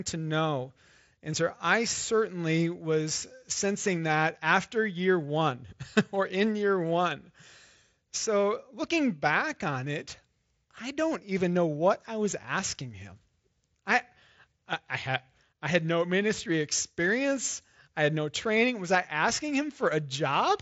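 No technical faults are audible in this speech recording.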